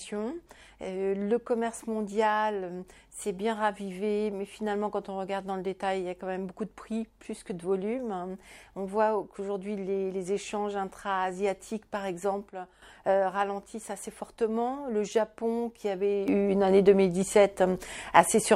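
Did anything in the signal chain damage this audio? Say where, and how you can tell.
Yes. Sudden gain jumps: at 12.48 s the level falls about 8 dB until 12.82 s, and at 16.28 s it rises about 8 dB to the end. The noise floor steps instantly too, unlike a compressor's gradual ride, so this is likely an unramped digital gain change.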